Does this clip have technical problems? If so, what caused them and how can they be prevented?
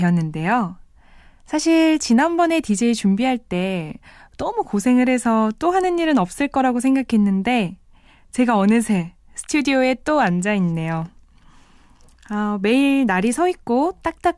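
No, this clip has no technical problems, so there is nothing to prevent.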